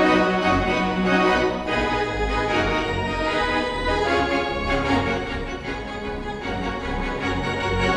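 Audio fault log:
No faults can be heard anywhere in the clip. The log therefore has no timed entries to record.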